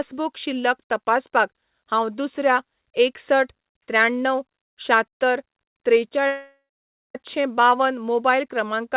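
Long network dropout in speech heard through a narrowband call path cut off at 4 kHz, consistent with G.711 mu-law at 64 kbps: from 6.27 to 7.15 s the last sound stretches into a fading buzz, then 0.53 s of silence, and speech resumes with that stretch lost, likely because packets never arrived.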